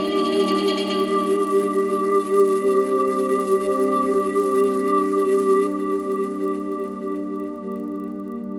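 A steady ticking at 25 per second runs under the music for the whole clip, heard only while the music sounds. This is a resampler restarted on every block: each 40 ms block was converted alone, likely from 24 kHz to 48 kHz, leaving a small error at every block edge.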